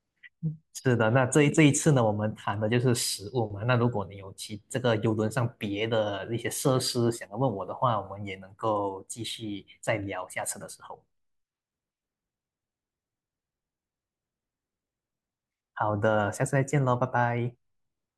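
No technical fault can be heard anywhere in the speech recording. Nothing in it calls for a timestamp or a note on what went wrong.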